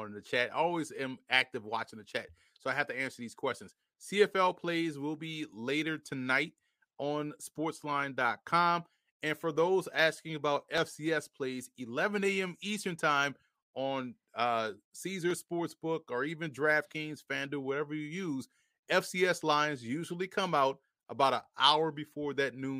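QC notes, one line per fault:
10.78 s and 15.31 s, dropped samples: two single sharp clicks, the first right after "asking about". The waveform jumps ahead, likely because a fraction of a millisecond of samples went missing, too brief to lose any sound but enough to leave a thin vertical line across the spectrum.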